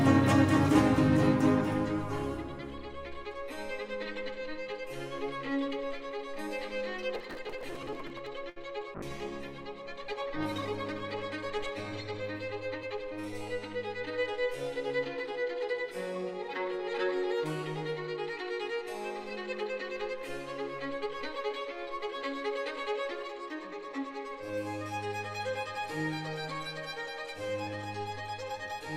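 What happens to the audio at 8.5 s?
Right around there, from about 8.49 to 8.58 s, you get a short stall from a late packet. The packet didn't show up on time, the jitter buffer ran dry, and the receiver stretched the last bit of sound for about 68 ms until it arrived, then carried on from the same spot. Nothing actually goes missing; you just hear that sound hang on a touch too long, with a faint buzz or dip, and everything after it runs about 68 ms later.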